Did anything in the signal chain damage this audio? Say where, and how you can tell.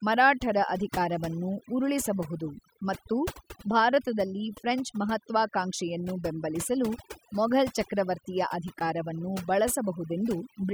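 Yes. Overdone noise removal runs through the whole clip. The suppressor is set too aggressively, driving frequency bands near its noise estimate almost to zero. Gaps fall to near silence with twinkling specks, and quiet parts of the speech are stripped away.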